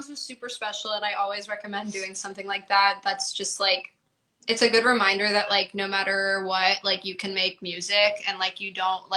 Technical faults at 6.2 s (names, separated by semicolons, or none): none